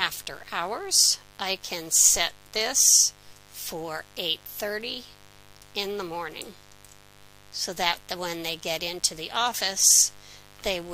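A mains buzz runs through the whole recording, sitting roughly 30 dB below the main sound. It is raspy rather than smooth, which separates it from plain mains hum. A hum is a soft, round tone near 50 Hz. Here, sharp spikes arrive twice per 50 Hz cycle and spread harmonics up into the kilohertz range. That points to a dimmer, a rectifier or a missing shield coupling switching noise into the audio path.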